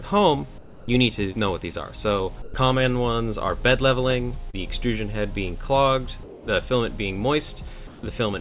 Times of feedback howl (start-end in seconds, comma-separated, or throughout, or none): none